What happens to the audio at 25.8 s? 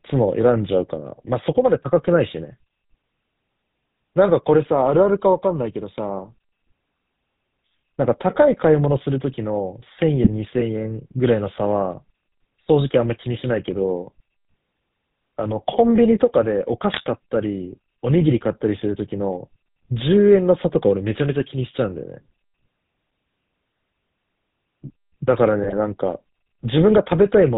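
That's a short burst of GSM bit errors, running from about 25.64 to 25.83 s. Corrupted bits hit the decoder's filter, pitch and gain values for a handful of 20 ms frames, so the spectrum warps and the level jumps, giving a quick squawky, gargling break.

Under it, as everywhere in the clip, the GSM full-rate codec is plainly audible. The pulse-driven vocal-tract model with sparse excitation and nothing above 4 kHz leaves the speech dull and buzzy-gravelly, which fits the 13 kbps full-rate coder.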